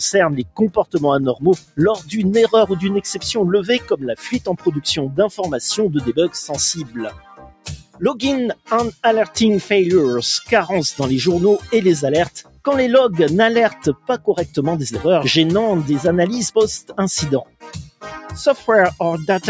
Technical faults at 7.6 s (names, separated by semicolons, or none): noise suppressor applied to music or sounds; sound cut by the noise suppressor